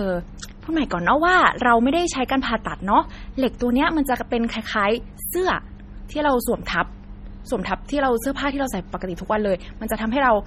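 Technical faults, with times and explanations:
Throughout, MP3 compression: the speech sounds watery and swirly, with nothing above 16.8 kHz; likely heavy low-bitrate encoding, fitting about 32 kbps, dropping weak spectral lines.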